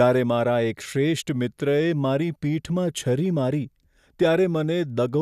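Speech recording, no technical faults detected on listening.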